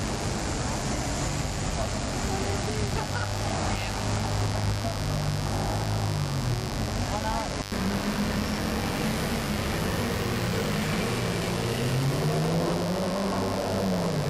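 A steady, raspy mains buzz runs through the whole recording, sitting only about 10 dB below the audio: spiky 50 Hz interference with harmonics well into the kilohertz range.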